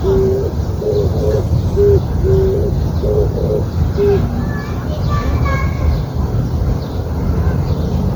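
Generation loss runs through the whole clip, most likely from the sound being passed through MP3 encoding around ten times, which fits a 96 kbit/s chain. Each re-encode quantises the signal again on a shifted frame grid, so the coding noise and spectral gaps pile up instead of staying put. The result is a swirly, hollow texture with smeared transients. Content still reaches up to 19.9 kHz.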